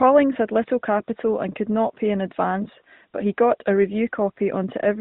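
From 2.64 to 2.68 s, after "could not pay an", a lost AMR speech frame was patched with the previous pitch settings at lower gain, causing a brief dip or warble that fits one 20 ms frame.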